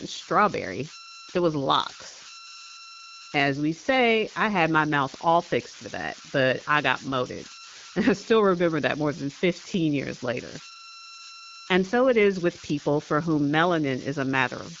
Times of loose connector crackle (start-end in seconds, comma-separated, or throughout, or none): none